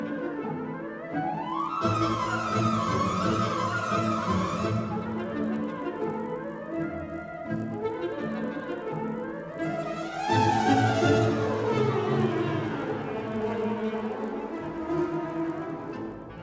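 From 1.5 s onward, a resampler restarted on every 20 ms block leaves edge errors: a 50 Hz buzz with signal, seen as evenly spaced vertical spectrogram lines.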